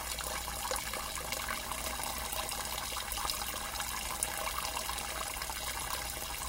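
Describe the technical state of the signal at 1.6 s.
At 1.6 s the audio is being read two samples at a time (double speed), a fault that runs through the whole clip. Each pair of samples is treated as a single frame, as if the data held two channels or samples twice as wide, so the sound plays twice as fast and a full octave, 12 semitones, higher. What separates this from an ordinary pitch shift is that speed and pitch rise together by the same factor of 2.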